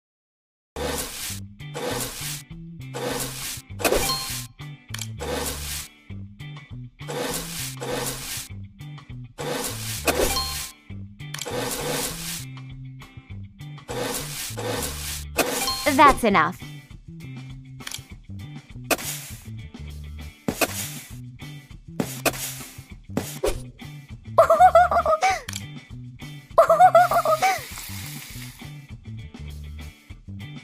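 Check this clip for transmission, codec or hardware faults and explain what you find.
There is one fault, a cut-off start. The clip holds digital silence until 0.76 s, then the sound bursts in mid-event with no natural onset or fade-in. Capture or streaming began late, after the sound was already under way, so its opening was never recorded.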